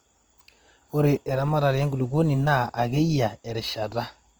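Opus compression throughout: speech sounds rough and grainy, likely Opus music-mode coding around 24 kbps, filling starved bands with folded or noise energy.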